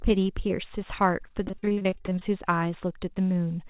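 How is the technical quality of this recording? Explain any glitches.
The speech has one glitch: repeated packet loss (robotic sound) between 1.44 and 2.23 s, heard through a narrowband call path with nothing above 4 kHz, which fits 64 kbps G.711 telephony. Across that stretch, 18 short dropouts arrive one after another, the longest about 41 ms. The receiver fills each hole by stretching the preceding sound, so nearly half the span is synthetic, and the speech turns choppy, with fragments missing.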